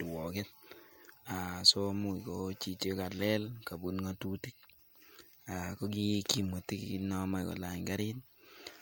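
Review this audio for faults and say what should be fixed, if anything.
No faults turn up in this audio, so nothing needs to be fixed.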